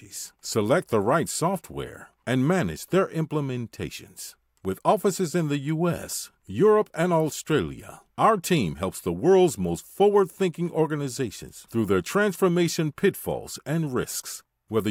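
No technical faults can be heard anywhere in the recording.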